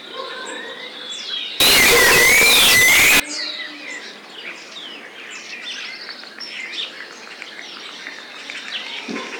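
From 1.60 to 3.20 s the sound jumps to a very loud, harsh, almost square-wave roar at an almost fixed, high level, with quiet background noise raised to the same level as everything else, though the pitch contour can still be followed. This is float read as integer, likely 32-bit float samples interpreted as 32-bit integers. Ordinary clipping only flattens peaks that were already loud, whereas here every moment, however quiet, is pushed to the same level.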